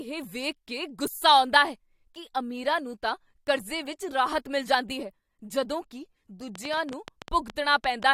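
From 6.55 to 8.04 s, a train of clicks ticks over the speech. About ten sharp, uneven pops come 7.5 per second. Likely nearby interference.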